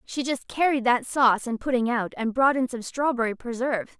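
No technical faults are audible anywhere in the speech recording.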